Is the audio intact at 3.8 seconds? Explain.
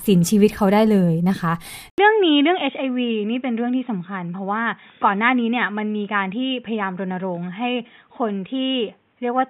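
No. From 1.9 s onward, after an 80 ms gap, the input likely switched to a poorer device, leaving the sound dull, cut off above 3.8 kHz, roughly 10 dB quieter, with new faint noise.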